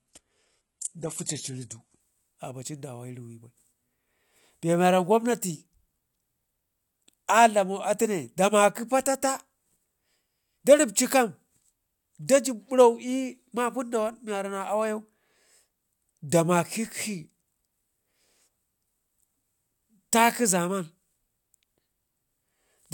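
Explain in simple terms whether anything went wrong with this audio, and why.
The first 2.0 seconds come from an adaptive stream starting at a low bitrate. The player began on a heavily compressed version of the speech to start quickly, so the crisp upper tones sound dull or artificial. At 2.0 s it switches to a better version and the sound clears at once, with no gap.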